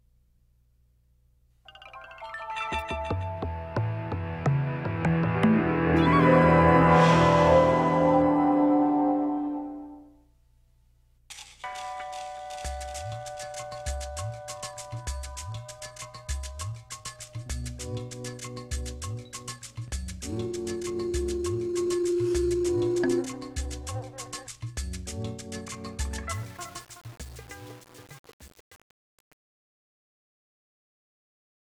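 Truncation distortion on a fade runs from 26.33 s to the end at 31.61 s. The fade-out is carried at only 7 bits with no dither. As the level sinks toward the smallest step, the waveform coarsens into square steps, and the tail turns gritty.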